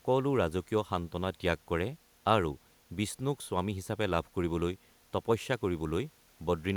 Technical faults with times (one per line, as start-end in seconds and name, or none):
none